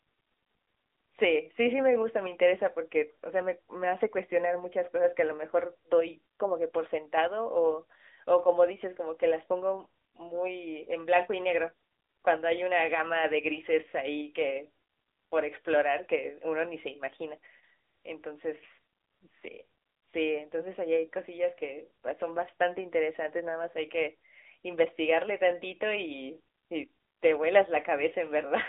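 From start to finish the speech runs through an AMR narrowband mobile codec, the old 2G/3G phone coder. Everything sits in a telephone band of roughly 300 Hz to 3.7 kHz, with nothing at all above 3.8 kHz, so it's thin and boxy. The coder rebuilds speech from a vocal-tract model driven by sparse pulses, and here the damage is plainly audible: a buzzy, synthetic edge that fits one of the mid-rate modes, around 10 kbps.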